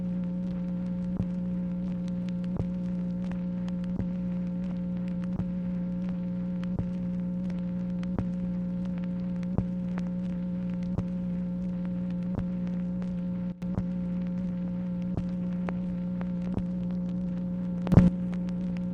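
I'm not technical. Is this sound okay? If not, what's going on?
No. There's a sudden gain jump at 13.52 s, where everything abruptly drops much quieter, and another at 17.92 s, where it leaps back up louder. Both the sound and its background noise shift together at once, likely because a volume setting changed instantly instead of smoothly.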